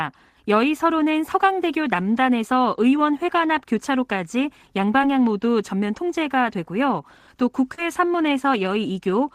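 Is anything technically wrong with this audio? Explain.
Yes, there is short concealed packet loss at two points. Around 5.02 s about 10 ms of audio never reached the decoder in time, and from 7.75 to 7.79 s about 20 ms went missing. Each time the receiver filled the gap by extending the preceding sound and then blending back into the real stream. In this speech that patch is heard as a brief smear or wobble, and a short consonant may disappear.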